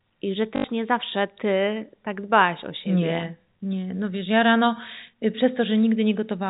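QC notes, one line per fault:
0.56 to 0.64 s, packet loss with last packet repeated: about 80 ms is lost. The receiver replays the last chunk until new audio arrives. Repeats join out of step with the pitch, so they buzz robotically near 50 Hz, which fits four 20 ms packets.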